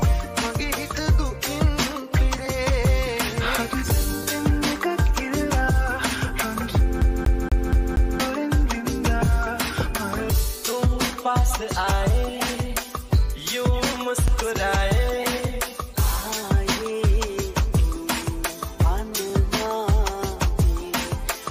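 A CD stuck on one turn runs from 7.01 to 8.20 s. The same 0.24 s slice of audio plays five times in a row with a brief mute at each jump, giving the quick, perfectly even stutter of a skipping disc. A scratch keeps throwing the laser back one track at the same point on every rotation, so each loop has an identical length. The second fault is overlapping chunks, at 14.28 to 14.30 s. About 23 ms of audio is heard twice, producing a short click-like stutter at the join. The audio was processed or sent in blocks, and here one block began before the previous one had finished, so its opening repeats the tail just played. Its position fits 5-second chunks.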